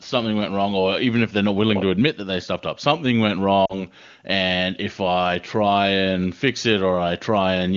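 At about 3.65 s there's a short run of lost AMR speech frames lasting until roughly 3.87 s. About 40 ms of speech went missing, which fits two lost frames. The decoder stretched the last good sound with fading gain, giving a brief smeared dip before the wideband speech recovers, rough for a moment.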